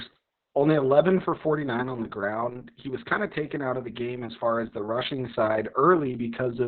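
Throughout, heavy Opus voice compression in narrowband SILK mode leaves the speech muffled, hoarse and robotic, consistent with roughly 6 kbps; spectrograms show nothing above 4.2 kHz.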